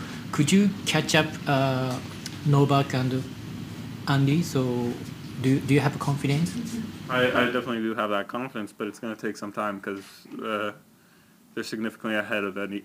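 Throughout, sample clock jitter: the converter's clock wanders by around 5 microseconds, so samples land early or late and steep, loud passages pick up a grainy hiss roughly 30 dB below the signal. Unlike a fixed noise floor, it disappears whenever the sound falls silent.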